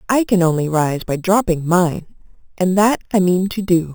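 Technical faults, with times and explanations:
Throughout: imaging from sample-and-hold upsampling. Repeated samples without smoothing mirror the speech spectrum, pointing to an 8 kHz original rate. A metallic fizz about 19 dB down fills 4 to 8 kHz. The spectrogram shows flipped harmonics above 4 kHz, and the waveform shows staircase steps.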